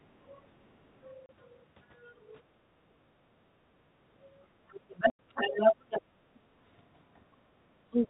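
The echo canceller repeatedly clamped the microphone while the far end played out, pulling the room background down by about 8 to 13 dB. This background gating is heard as brief dips in the ambience at 0.43–0.59 s, 2.42–3.23 s, 3.57–4.00 s, 4.45–4.58 s, 6.23–6.61 s and 7.41–7.62 s, each recovering once the canceller releases.

At 1.26 s a packet went missing and the receiver substituted silence. This packet loss filled with silence leaves a 30 ms hole with hard edges. A wider 90 ms gap at 5.10–5.19 s fits three such 30 ms packets.

From 4.68 to 6.02 s a second voice comes through at roughly the same level as the speech, most likely because the echo canceller failed to remove the other side's voice leaking through from the loudspeaker. The 90 ms silence gap cuts across this stretch.

From 7.90 s to the end, the speech drops sharply, by around 25 dB. This is speech suppressed in double talk: the canceller likely mistook the talker for echo while both sides spoke. 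All of this is carried over G.711 mu-law telephone coding, limited to 4 kHz.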